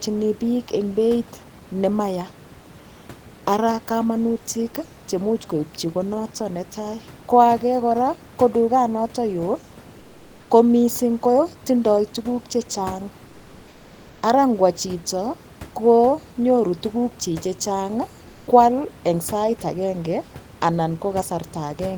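Speech with room noise sitting about 25 dB below the voice. From 9.99 to 10.49 s the real background is replaced by comfort noise, a steady, featureless hiss about 2 dB quieter, ending just before "ko mising' kotindoi tukuk". This points to the likely cause, discontinuous transmission, with the receiver synthesising noise during a 500 ms pause.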